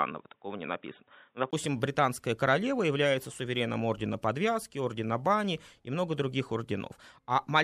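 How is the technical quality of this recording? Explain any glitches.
The recording has one glitch. From 0 to 1.53 s the speech is dull and boxy, with nothing above 3.8 kHz. This is likely an input switched to a poorer device. A 20 ms silence marks the switch back, just before "британская королева является сувереном". A change of background noise, faint at around 55 dB down, sets it apart from a plain filter, and the level stays about the same.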